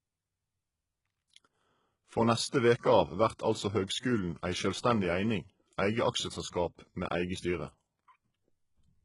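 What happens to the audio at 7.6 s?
At 7.6 s, as through the whole clip, the treble sounds bright but gritty and lispy, with nothing above 11.1 kHz. This is likely HE-AAC compression at a very low bitrate. The upper band is rebuilt from copied lower bands rather than simply muffled, so its harmonics misalign.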